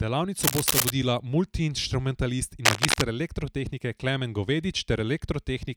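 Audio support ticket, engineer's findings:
Cable scratch noise, 0.41–0.90 s and 2.65–3.02 s: dense, uneven scratching bursts, first at about speech level, second somewhat louder. Likely worn cable or connector shifting, its contact resistance jumping rapidly.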